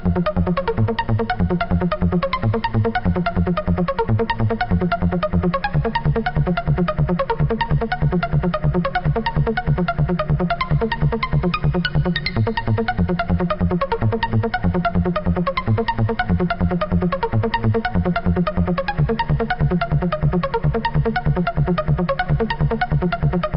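No audible technical faults.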